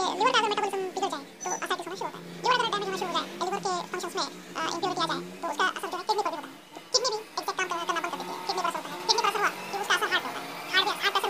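From start to finish the audio was read two samples at a time, running at double speed, an octave high; spectrograms show stretched-up harmonics, waveforms look compressed.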